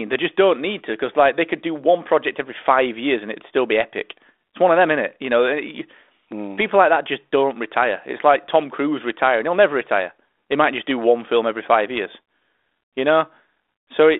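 No technical faults are audible.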